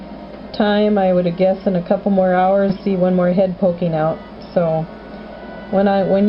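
At 2.69 to 2.71 s there is a skip ahead. Around 0.4 s of audio is simply missing. Later audio was already waiting, so playback jumps straight forward. Nothing fills the join. The two sides butt directly together, with no gap.

From 2.79 to 3.86 s comes a jitter buffer speed-up. The buffer held more than its target. The receiver trimmed many short pitch-period pieces in a row, about a tenth of a second in total. The audio runs at 110% speed. Pitch stays the same, but it sounds hurried.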